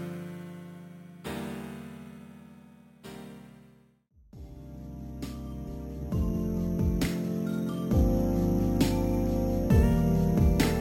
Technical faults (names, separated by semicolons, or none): imaging from sample-and-hold upsampling